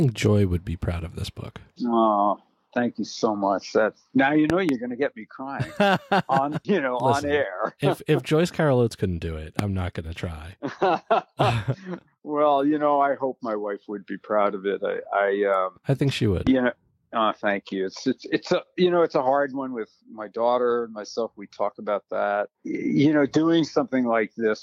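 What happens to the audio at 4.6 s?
A loud pop occurs between 4.50 and 4.71 s, heard as two sharp pops in quick succession that stand out roughly 15 dB above the surrounding sound, which carries on underneath. The likely cause is a sudden voltage step or pulse entering the signal, from a plug being moved, a switch, a static discharge or a driver glitch. The circuitry downstream shapes each pulse into a brief thump-like burst that may ring briefly.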